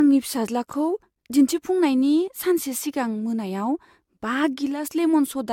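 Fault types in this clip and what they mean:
Generation loss: the speech has a swirly, smeared, hollow quality, with consonant attacks blurred and nothing above 17 kHz. That's more damage than a single pass at this quality would leave, and it fits an AAC-LC chain at 96 kbit/s run through around five times. The likely cause is repeated decoding and re-encoding, where each pass quantises again on a shifted frame grid so the noise and spectral holes pile up.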